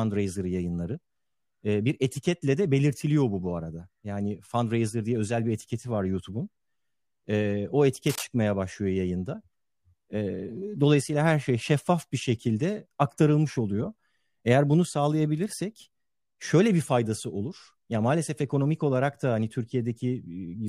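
At 8.07 to 8.24 s a brief burst of cable scratch noise cuts across the speech, a dense, ragged scratching roughly 10 dB below it. It is likely caused by a worn cable or connector shifting, its contact resistance fluctuating rapidly.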